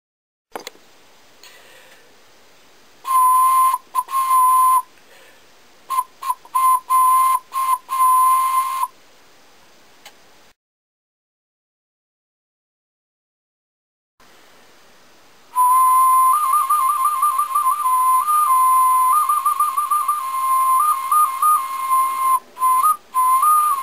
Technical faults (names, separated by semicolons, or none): none